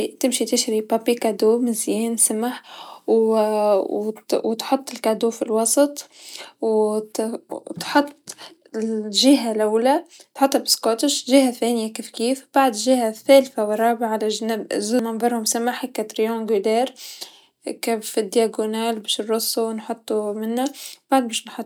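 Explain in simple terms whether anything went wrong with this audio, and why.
Nothing went wrong here: the recording of speech holds together the whole way, with no glitches, dropouts or odd sounds anywhere along it.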